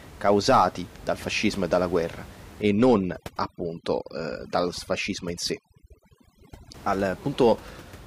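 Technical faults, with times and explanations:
2.62–6.74 s, overdone noise removal: the room noise, about 20 dB below the speech elsewhere, drops and breaks up into twinkling specks, and quiet parts of the speech go with it as bands near the noise estimate are cut. A gate would mute everything at once, not band by band.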